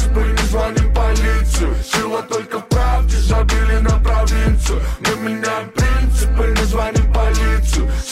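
Clock slip clicks run from 0.29 s to 8.02 s: about thirty faint ticks at roughly 0.3 s intervals, each a single sample dropped or repeated. The likely cause is two devices on separate, unsynchronised clocks drifting apart by around 100 ppm, with a slip whenever the gap reaches one sample.

Damaged data in a compressed stream appears from 5.53 s to 5.57 s as a brief glitch. Corrupted bytes left the decoder unable to read those frames, so it lost sync and jumped ahead to the next valid frame header.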